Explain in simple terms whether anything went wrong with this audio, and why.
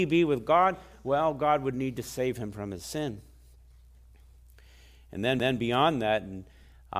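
Something went wrong at about 5.39 seconds: a CD skip. The laser reading this speech off the disc jumped to another turn of the disc's spiral track, likely because of a knock or a flaw on the disc. For a tiny fraction of a second the player goes silent, then carries on from a different spot. You hear a small tick, and the speech jumps abruptly instead of flowing on.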